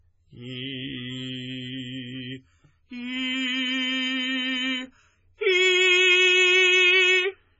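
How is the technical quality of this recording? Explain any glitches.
The recording is heavily compressed, and the damage runs through the whole piece of music. This is likely MP3 compression at a very low bitrate, consistent with something near 16 kbps. With so few bits, the encoder cuts off all treble, leaving nothing above 7.6 kHz, and discards quieter frequency components that then flicker in and out between frames. The result is dull, muffled music with a watery, swirling texture, metallic chirps in the upper range, and smeared attacks.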